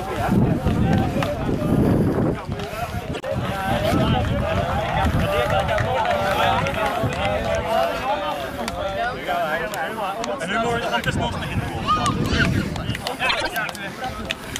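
Two brief garbled flutters break the sound, one at 3.13 to 3.24 s and another at 13.29 to 13.51 s. These are frames out of order: two adjacent blocks of audio were decoded swapped, so each stretch plays its halves exchanged with no time lost. The first swap involves blocks of about 26 ms, which points to single frames. The second uses blocks of about 78 ms, consistent with runs of three frames.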